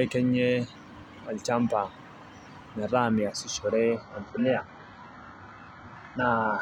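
From 3.95 s to 6.61 s an adaptive stream at a lower bitrate plays: a sudden, gapless switch, nothing above 7.9 kHz, heavier codec artefacts.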